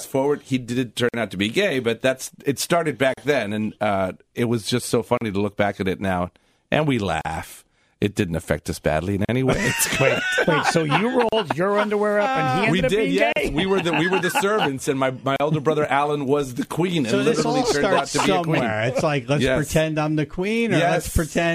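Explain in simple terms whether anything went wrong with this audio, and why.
The audio was encoded in separate pieces, and the pieces were joined without trimming the silent padding each encoding adds. The result is a gap at a join of encoded pieces every 2 seconds: a sudden 50 ms dropout at 1.09 s, then 38 ms dropouts at 3.14, 5.17, 7.21, 9.25, 11.29, 13.33 and 15.36 s. After each one the sound picks up where it stopped.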